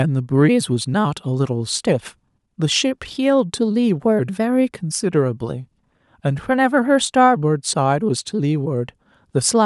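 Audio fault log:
Nothing to log here, since this speech clip comes through without a single fault worth noting.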